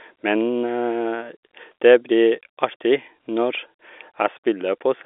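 Speech over G.711 telephone coding, band-limited to roughly 300 Hz to 3.5 kHz as expected for a phone line, with no technical faults to report.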